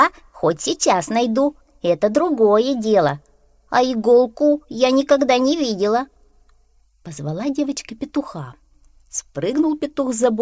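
No technical fault can be heard anywhere in this audio. Nothing in the sound suggests a problem in how it was recorded, processed or delivered.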